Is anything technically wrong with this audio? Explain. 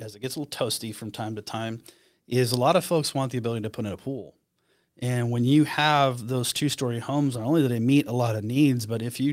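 Yes. A lost packet rebuilt from error correction occurs at 7.33 to 7.39 s. The next packets carried low-bitrate backup copies, and the decoder played those instead, so no gap opens. About 40 ms of speech sounds briefly rougher and noisier, which fits two lost 20 ms packets.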